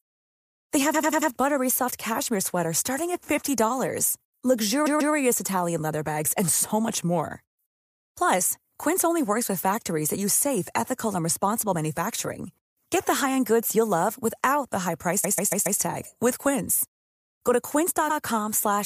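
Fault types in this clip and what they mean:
Repeated frames: a block of compressed speech was delivered more than once, so the decoder plays it again. Here the speech stutters four times as 93 or 139 ms blocks repeat up to four extra times, each lengthening the clip by 0.09 to 0.56 s.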